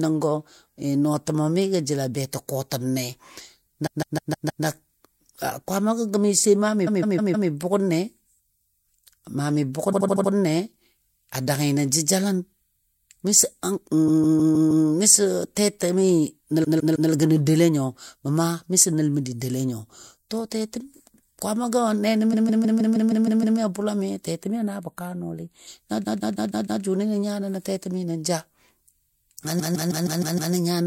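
Repeated frames occur eight times: 3.86–4.64 s, 6.86–7.49 s (after "gəmi sai maa mi"), 9.92–10.31 s (after "maa mi"), 14.07–14.85 s, 16.63–17.10 s (between "tɛtɛmi nəl" and "gənɔ doule nyo"), 22.32–23.58 s, 26.03–26.82 s and 29.59–30.53 s. Each time, a block of compressed frames, mostly 156.7 ms long but 78.4 ms at 9.92 s, is decoded again and again, from 3 extra plays up to 8 at 22.32 s. The result is a rhythmic stutter. On a spectrogram, an identical patch tiles side by side. In the waveform, the same envelope shape recurs at a fixed period.

Channel delay (comb filtering) affects 24.43–25.67 s. One channel lags the other by roughly four samples, about a tenth of a millisecond. When the channels are summed to mono, the shared content cancels at regularly spaced frequencies, with the first notch around 5 kHz. The sound turns thin and hollow in the upper range. A spectrogram shows dark horizontal bands at fixed frequencies throughout that stretch.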